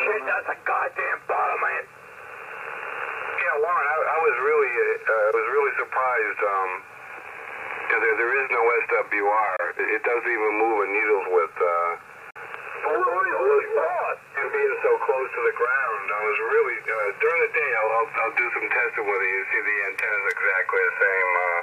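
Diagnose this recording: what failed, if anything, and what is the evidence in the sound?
The wireless link to the headphones likely failed here, a Bluetooth dropout: audio packets arrived too late and were discarded. Silent holes open at 9.56 to 9.60 s (23 ms) and 12.30 to 12.37 s (46 ms), consistent with one and two lost frames, and the sound resumes further along, as if it had kept playing.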